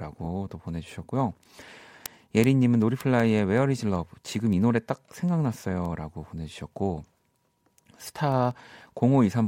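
From 0.16 s to 9.46 s the speech carries word clock ticks, sharp clicks about every 0.2 s, some 50 in all. An unlocked receiver clock drifting by roughly 100 ppm drops or repeats single samples. Spectrograms show evenly spaced thin vertical broadband lines, and waveforms show one-sample steps.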